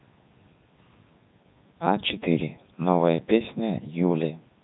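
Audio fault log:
throughout, Codec 2 vocoder: the speech is resynthesised from sine waves driven only by pitch, voicing, energy and a coarse spectral envelope, so it sounds heavily buzzy and robotic, with nothing above 3.9 kHz, which fits the codec's 3.2 kbit/s mode.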